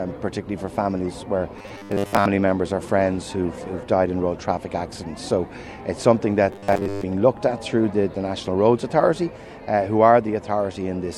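Twice the sound goes robotic: from 1.59 to 2.26 s and again from 6.53 to 7.07 s it turns into a stiff metallic buzz at 100 Hz. That's likely robotic sound from repeated short buffers, with a 10 ms chunk looped in place of most of the real audio.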